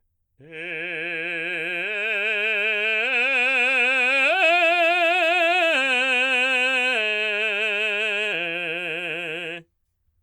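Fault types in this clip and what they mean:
Nothing to flag on this music clip; no faults turn up anywhere in it.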